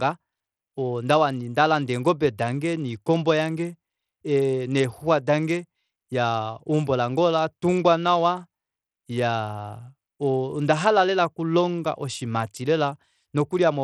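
Bluetooth SBC compression runs throughout the speech, the likely cause being a Bluetooth link using the SBC codec with a small bit pool, which fits a bitrate near 80 kbps. SBC splits the signal into a few wide sub-bands and hands out bits without a hearing model, so the weak upper bands get starved while the rest are coarsely quantised. The treble thins and flickers, and a plainly audible gritty, aliased grain rides on the voice.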